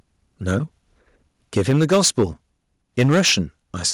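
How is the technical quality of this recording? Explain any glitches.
The recording has two kinds of glitch: repeated clipping on loud passages and one abrupt drop in level.

Microphone overload occurs at 0.48 to 0.56 s, 1.57 to 2.24 s and 2.98 to 3.4 s. The cause is likely an input gain set too high, so the speech peaks run past the converter's ceiling by about 3 dB, 7 dB and 6 dB and get sliced flat. Around a twentieth to a tenth of the samples in those stretches are clipped, which puts a harsh, crackling edge on the loudest syllables.

Microphone volume stepped down at 1.71 s, in the middle of the longest overload. The likely cause is the call software detecting the clipping and cutting the device's input gain in a single step of about 3 dB. Voice and background both drop suddenly at that instant rather than fading. The clipping continues afterwards, so the reduction was not enough to stop it.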